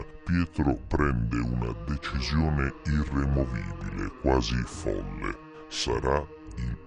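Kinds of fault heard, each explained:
wrong sample rate: Samples play unconverted at a lower rate. Everything runs at two-thirds speed, seven semitones low, fitting 48 kHz audio played at 32 kHz.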